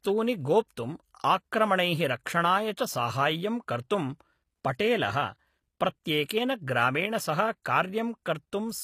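HE-AAC compression runs through the whole speech clip and is plainly audible: the treble is likely rebuilt by spectral band replication, copying lower bands upward. This fits a low bitrate near 24 kbps. The result leaves s sounds gritty and metallic, with nothing above 15 kHz.

Pre-echo appears at 0.68 to 0.70 s, spread over 22 ms, and again at 6.04 s, spread over 12 ms. Block-wide quantisation noise leaks ahead of each sharp attack, so a brief hiss precedes it and the onset sounds softened.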